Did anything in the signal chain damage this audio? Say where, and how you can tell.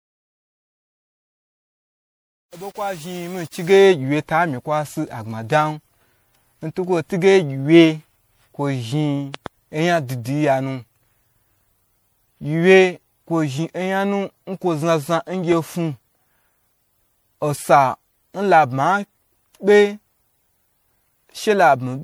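Yes. Throughout the speech, smeared, swirly, hollow tone with blurred onsets; the spectrogram shows ragged holes. This is likely repeated lossy re-encoding, generation loss, fitting several passes at 96 kbit/s MP3.

From 0 to 3.86 s, the fade-in is gritty, worst until 3.73 s. The waveform shows square stair-steps. This is truncation distortion on a fade from a sample-format stage, fitting 8-bit undithered truncation.

Loud pops: two between 9.34 and 9.48 s, about 10 dB above the speech, and one at 15.52–15.54 s, about 5 dB. These show as sharp waveform spikes and full-band vertical lines on a spectrogram, most likely from analogue wiring or switching transients.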